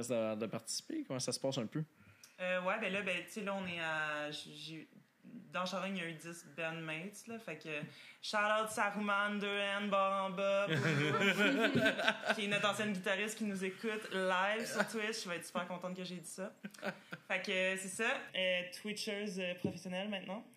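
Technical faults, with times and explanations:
18.30 to 20.57 s, channel delay (comb filtering): the sound turns hollow and phasey, with a fixed notch near 1.5 kHz and more evenly spaced above it. One channel lags by roughly 0.4 ms, so the shared content cancels at those frequencies when the channels are summed to mono.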